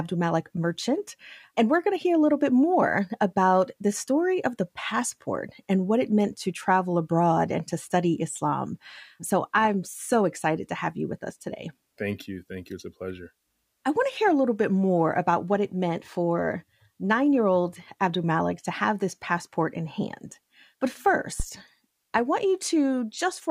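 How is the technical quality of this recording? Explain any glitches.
The recording has one glitch, near the end.

A phantom power thump occurs from 21.40 to 21.45 s. A supply voltage on the live microphone input was switched, and that sudden DC step passed through the input's coupling capacitors as a single low-frequency pulse. It is a deep thump peaking at about -15 dBFS and dying away quickly, with a decay of roughly 12 ms, so it reads as a short, dull knock.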